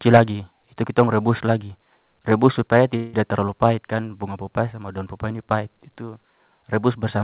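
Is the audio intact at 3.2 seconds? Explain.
No. A call audio freeze spans 2.96 to 3.29 s, likely from delayed packets emptying the jitter buffer. About 0.17 s of fading buzz or hiss fills the gap, then the sound resumes unbroken but later, visible as a smeared, decaying band below 4 kHz.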